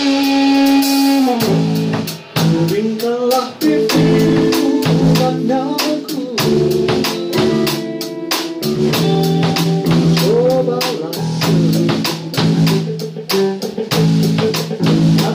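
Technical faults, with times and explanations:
Throughout, hard clipping: the level is driven about 7 dB past full scale, so a small share of peaks get squared off, adding a gritty crackle on loud moments.
6.27–6.30 s and 9.60–9.66 s, corrupt frame decoded: damaged compressed data gets played anyway, throwing energy to the wrong frequencies. The first is a faint glitch, like one bad frame. The second is a much louder glitch spanning what sounds like a few frames.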